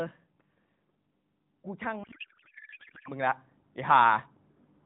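From 1.44 s to 4.3 s an automatic gain rising fault lifts the level by about 11 dB, voice and background swelling together slowly, unlike a sudden step change. Within that swell, from 2.04 s to 3.11 s, a codec payload misread turns the speech into garbled warbling noise that barely tracks it. Octet-aligned AMR frames are being unpacked as bandwidth-efficient ones, so fields land in the wrong places. Unlike packet loss, there are no gaps. The underlying AMR narrowband coding, whose light buzz fits about 12.2 kbps, carries on once the misread ends.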